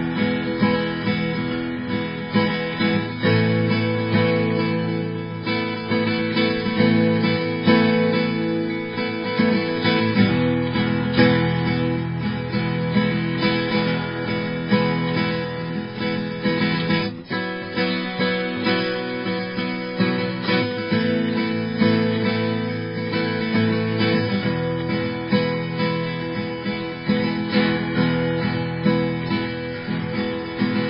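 Throughout the music, nothing sounds above 5.3 kHz, and layered swirling, warbling artefacts pile up, likely from transcoding between lossy codecs, starting with very low-bitrate MP3.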